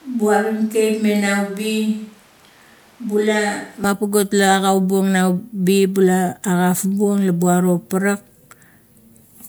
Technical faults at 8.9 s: none

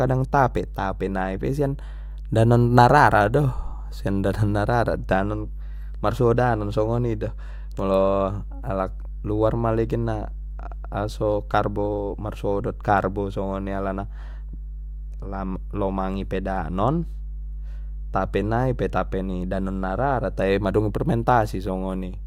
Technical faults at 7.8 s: mains hum

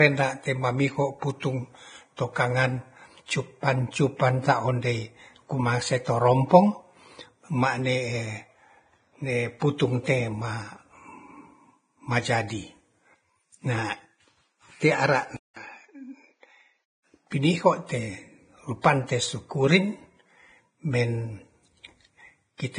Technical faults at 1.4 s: Vorbis compression; pre-echo

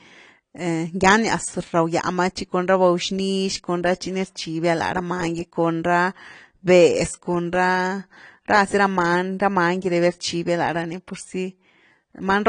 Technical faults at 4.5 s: AAC compression

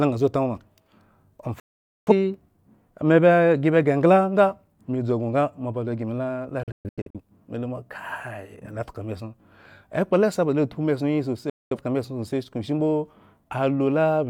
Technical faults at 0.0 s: none

